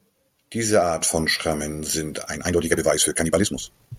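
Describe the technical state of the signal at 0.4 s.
At 0.4 s the speech signal is intact, with no audible fault at that moment.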